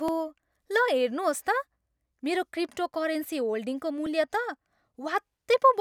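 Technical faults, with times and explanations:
0.08 to 4.06 s, periodic USB or driver dropouts: three tiny ticks arrive every 2.0 s in the speech. Each time, the bus or audio driver stalls briefly. About a millisecond of audio is skipped, not silenced. The sudden jump in the waveform produces each click.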